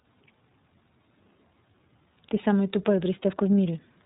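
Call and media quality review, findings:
iLBC codec artefacts, whole clip. Band-limited, nothing above 4 kHz. Plainly audible rough, synthetic texture on speech. Each frame's excitation coded independently, with grain consistent with the 30 ms, 13.33 kbps mode. Probable component: narrowband VoIP leg.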